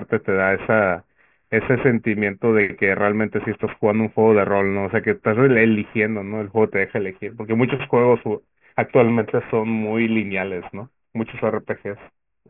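Aliasing runs through the whole speech clip. The audio was cut to a lower sample rate without a proper filter first, which fits a 6 kHz rate. Energy above 3 kHz folds back down, roughly 20 dB below the speech. Sibilants sound gritty and metallic.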